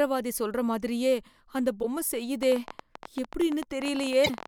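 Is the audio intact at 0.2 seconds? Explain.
Yes, the speech at 0.2 seconds plays cleanly, with no dropout, click, distortion or other fault at that moment.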